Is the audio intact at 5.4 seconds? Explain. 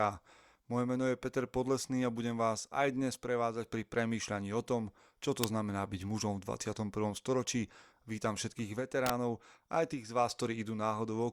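No, not quite. At 5.44 s, right after "o tom čo to" and before "znamená byť mužom v", there's a short snap lasting about 4 ms, sitting on top of the speech rather than replacing it. It sounds like an electrical switching spike, most likely from a switch, motor or static discharge nearby arcing briefly and getting picked up by the audio line. It peaks around -10 dBFS.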